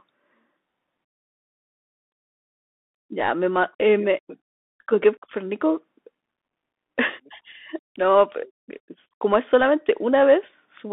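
Throughout this speech clip the sound is thin and boxed-in, with a granular hiss beneath it, scratchy s sounds and roughness on loud high passages. This is the Bluetooth CVSD headset codec: a band of about 200 Hz to 3.6 kHz, and one-bit slope coding that fits a 64 kbit/s stream and can't keep up with fast rises.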